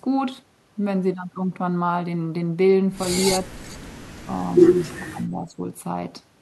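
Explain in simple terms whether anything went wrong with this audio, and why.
Speech suppressed in double talk, at 3.4 to 3.53 seconds and again at 5.08 to 5.6 seconds. The voice briefly sinks, at first and then more deeply for about half a second. The likely cause is both sides talking at once: the call's echo canceller, unable to tell this talker apart from the echo of the other person, turned everything down together, taking the voice with it.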